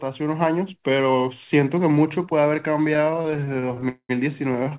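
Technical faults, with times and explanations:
2.94–3.87 s, repeated stalls (stutter): the speech keeps catching for 25 tiny gaps, none over 24 ms, adding up to 287 ms or about a third of that stretch. Packets arrived late, so the jitter buffer kept running dry and the receiver padded each gap with the last bit of sound. Nothing is lost, but it drags and judders.
3.89–4.11 s, call audio freeze: a single hold of about 205 ms, where the last sound is stretched and fades into roughly 70 ms of silence before the speech picks up where it left off. The likely cause is packets held up in transit, which emptied the jitter buffer.
4.53–4.73 s, repeated stalls (stutter): five more short catches, each at most 23 ms and 60 ms in total, covering about 30% of that span. It's the same late-packet starvation, and again the filled gaps slow the speech down without losing any of it.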